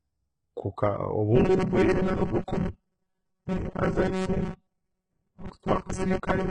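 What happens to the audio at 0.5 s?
At 0.5 s, as across the whole clip, the speech carries heavy codec damage, likely from HE-AAC compression at a low bitrate consistent with about 12 kbps. Content stops at 11 kHz. The treble is rebuilt from copied lower bands, so harmonics misalign and s sounds turn gritty, metallic or lispy.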